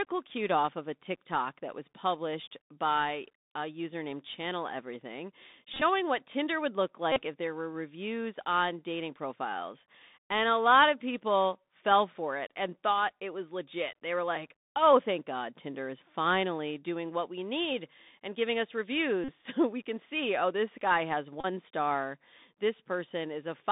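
The whole speech clip carries the Bluetooth CVSD headset codec. It sends one bit per sample at 64 kbps, stepping up or down. The band sits at 200 Hz to 3.7 kHz. Sibilants turn scratchy, loud bright sounds distort, and a granular hiss is plainly audible.

Bluetooth headset packet repeats follow. At 5.74 to 5.83 s, about 52 ms is lost in patches spread over 75 ms, the longest near 20 ms. At 7.12 to 7.22 s, after "would look" and before "if there were reviews", 41 ms repeats. At 19.24 to 19.31 s, after "need and giving us", another 41 ms repeats. At 21.41 to 21.46 s, after "oh this guy has", 30 ms repeats. Each time the chip replays the last packet, giving a short buzz near 267 Hz.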